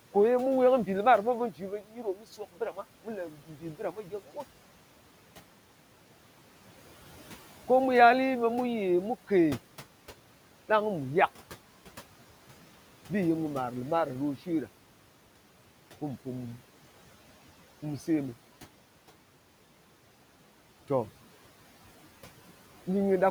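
The noise suppressor twice mistook parts of the speech for background and turned them down along with it: speech cut by the noise suppressor between 1.52 and 2.84 s, dropping by about 12 dB at its deepest, then again from 3.3 to 4.37 s, by about 11 dB. In each stretch roughly 0.4 s of speech is affected, so soft consonants and word endings sound swallowed or faint, sinking toward the room noise sitting about 22 dB below.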